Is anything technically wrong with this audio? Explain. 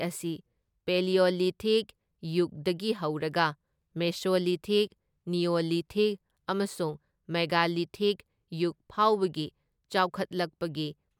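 No, nothing is technically wrong.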